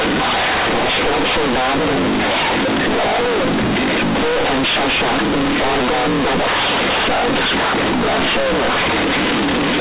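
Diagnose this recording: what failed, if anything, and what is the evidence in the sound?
Sample-format conversion failed, with companded audio read as linear: the mu-law bytes were never expanded, so the speech buzzes loudly throughout and the pauses fill with noise.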